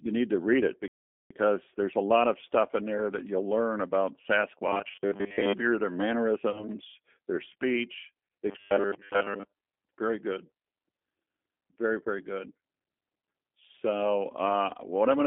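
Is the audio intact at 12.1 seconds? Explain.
No. At 12.1 seconds, as throughout the clip, the speech sounds thin, slightly rough and synthetic, with nothing above about 3.4 kHz or below 200 Hz. That is G.729 codec damage: each 10 ms frame is rebuilt from a vocal tract filter, pitch predictor and a few pulses, which fits an 8 kbit/s codec.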